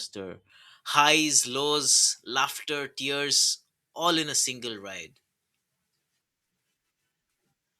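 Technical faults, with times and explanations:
0.50 to 7.79 s, pre-emphasis left on: from about half a second in, the treble jumps up and stays there, roughly 11 dB hotter at 10 kHz than at 1 kHz. Someone boosted the highs for the recording or transmission leg and nobody put the matching cut back on playback. The shape of the lift fits a J.17 curve. The speech ends up thin and glassy, with the sibilants spitting harder than they should.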